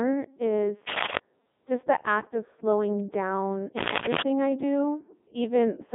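Throughout, the speech passes through a Codec 2 vocoder at 3.2 kbit/s. It sends only pitch, voicing and spectral shape, so the voice sounds robotic and buzzy. Nothing remains above 3.7 kHz.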